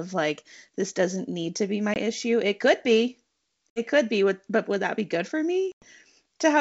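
Hard-edged silent holes at 1.94 s after "need to be my", 3.70 s after "could be", and 5.72 s after "that be good for" (lengthening from 20 to about 100 ms), with speech resuming slightly distorted. This is packet loss on an ADPCM call, which knocks the G.722 decoder's predictor and step size out of step.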